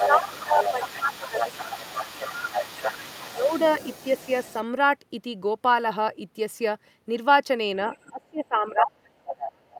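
Right from 0.0 s up to about 4.63 s, there's a second voice underneath the talker, sitting roughly 10 dB down. That's the other side's voice leaking through, most likely because the far end was playing over a loudspeaker and the echo canceller didn't scrub it all out of the mic. Overlapping that, from 0.06 s to 2.98 s, the talker keeps ducking by about 10 dB, adding up to around two seconds of dips. That's speech suppressed in double talk: with both people talking at once, the canceller likely couldn't tell its own talker from the echo and pulled everything down. It happens again briefly at 3.3 to 3.53 s, with the same dip of about 10 dB. Later there's a faint scrap of leakage at 7.91 to 8.1 s, roughly 25 dB under the speech. Then from 8.09 s to the end the suppression gets heavy, with drops of around 30 dB, so the talker nearly vanishes in places. Inside that stretch, at 9.38 to 9.49 s, the other side pokes through again at about 10 dB below.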